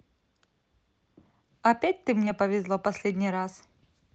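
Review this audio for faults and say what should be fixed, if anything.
A brief smear at 2.25 to 2.28 s is short concealed packet loss: 20 ms of speech arrived too late and the decoder bridged it by continuing the preceding sound. A deeper jitter buffer or forward error correction on the call would prevent it.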